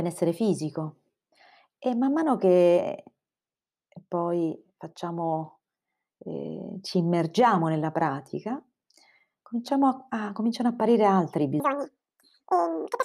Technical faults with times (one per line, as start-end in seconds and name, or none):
11.60-13.04 audio read two samples at a time (double speed)